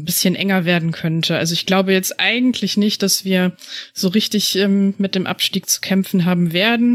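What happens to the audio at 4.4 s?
Nothing goes wrong at 4.4 s; the speech there carries on intact, with no dropout, click or distortion.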